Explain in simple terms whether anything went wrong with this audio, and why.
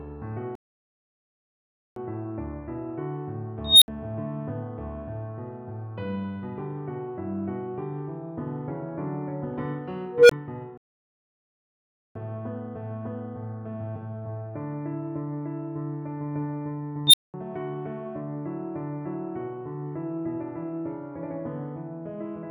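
Twice the sound simply stops and goes silent for well over a second: from 0.55 to 1.96 s (about 1.4 s) and from 10.78 to 12.15 s (about 1.4 s), then carries on. This is a playback stall. The likely cause is that the player ran out of audio to play, or was briefly held up by something else on the computer, so nothing reached the speakers until it caught up.

Three times a beep swells out of nowhere, gets very loud and harsh, and then cuts to a brief silence. At 3.65 to 3.88 s it is a high squeal around 4 kHz that builds over 0.17 s and drops out for 64 ms. At 10.07 to 10.31 s it is a lower tone around 500 Hz that grows over 0.23 s with a 20 ms gap. At 17.07 to 17.34 s a 4 kHz squeal shoots up in just 64 ms and then goes silent for 0.2 s. This is an unstable filter: a piece of the audio processing fed its own output back into itself with the wrong settings, so a tone kept growing until it overloaded and the output blanked until the filter reset.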